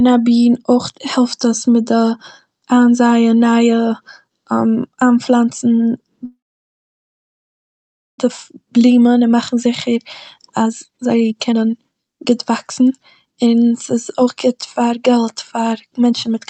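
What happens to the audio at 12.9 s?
You're in the middle of a jitter buffer speed-up that runs from about 10.40 s to 16.35 s. The receiver had built up more audio than it wanted, so it kept trimming off tiny slices, a pitch period or a few at a time, to catch up. The speech plays about 27% fast with the pitch unchanged, so it sounds rushed. In total, roughly a second and a half gets removed.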